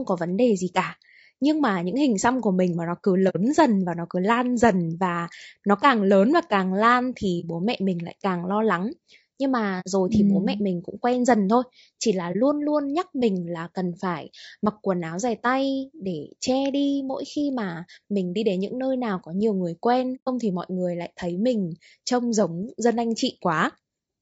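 Throughout, the speech sounds rough and grainy, with noise between the harmonics and a thin, synthetic top band. On a spectrogram, harmonic lines smear and the upper region looks patchy. This is likely low-delay AAC compression (AAC-ELD), with damage that fits a bitrate around 32 kbps.

AAC frame loss with muting leaves a soft-edged hole at 3.29 s after "mình mà nó cứ" (60 ms), a brief dip at 7.40 s after "và càng lan thì" (30 ms), a hole at 9.80 s (60 ms), a brief dip at 12.32 s after "dần thôi chỉ là" (30 ms), and a hole at 20.15 s (120 ms). The missing spectrum was zeroed, so the sound fades out and back in. These appear as tapered waveform gaps and blank spectrogram stripes.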